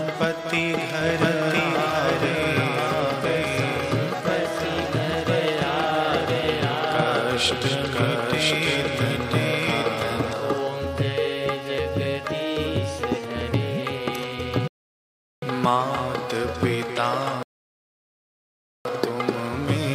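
From 1.01 s to 10.33 s the audio is a doubled audio track: a second, full-band copy runs about a second behind the original at roughly the same level. It is likely a second capture through a slower path or two misaligned copies in an edit. The copy adds no decay or room colour and begins and ends abruptly. On a spectrogram, every pattern reappears about a second later with the same bandwidth. The waveform shows overlapping, denser envelopes with sharp boundaries at both ends.

A rebuffering stall occurs twice. The player ran out of downloaded audio, stopped, and then resumed at exactly the same point. The first gap runs from 14.68 s to 15.42 s and adds 0.75 s. The second runs from 17.43 s to 18.85 s and adds 1.42 s. Each gap is dead silence with no missing material, shown as a flat line in the waveform and a blank vertical band across all frequencies on a spectrogram.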